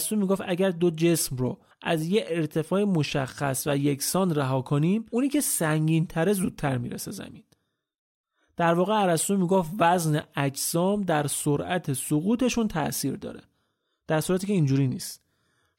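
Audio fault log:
No technical faults are audible in the speech recording, and the signal holds steady with nothing in it calling for a fault entry.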